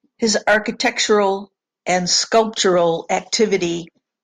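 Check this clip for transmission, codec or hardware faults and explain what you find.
No faults turn up anywhere in this speech recording.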